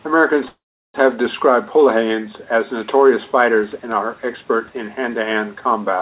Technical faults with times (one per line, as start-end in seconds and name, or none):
0.48-0.97 call audio freeze